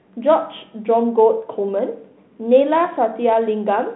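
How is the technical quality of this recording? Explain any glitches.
The technical quality of this recording holds up, with no glitches to explain.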